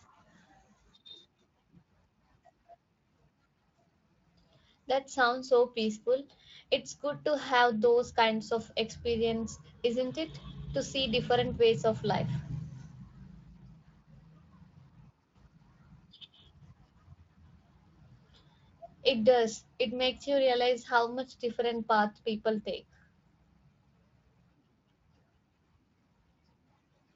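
No technical faults can be heard in this speech, which passes through a Speex codec path that is working as intended at what sounds like a fairly generous quality setting, with only light traces of its coding on the sound.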